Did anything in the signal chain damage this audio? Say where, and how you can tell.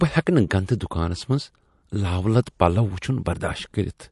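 Yes, at the codec stage. Throughout the speech faint detail swirls and warbles from frame to frame, which likely comes from MP3 compression, at a rate that fits about 48 kbps. Unlike a plain low-pass filter, the missing content flickers instead of rolling off smoothly.

There is also pre-echo at 0.67 s, where a sharp onset is preceded by a short burst of hiss about 11 dB above the quiet before it. That points to a long transform block of about 48 ms with no switch to short blocks, so the quantisation noise meant for the attack spread backwards. A click or dropout would not have this hiss that rises into the attack.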